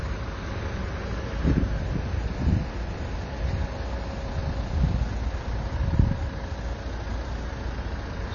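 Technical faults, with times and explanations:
Throughout: AAC compression. The sound is dull and smeared, with nothing above 6.9 kHz and plainly audible coding damage. This likely comes from AAC-LC at a low bitrate, fitting about 24 kbps, where the encoder lowers its cut-off and coarsely quantises the remaining spectrum.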